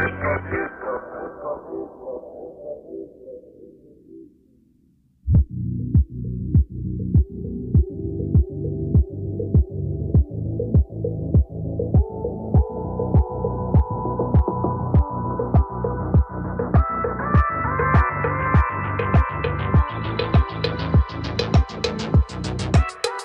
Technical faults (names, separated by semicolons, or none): none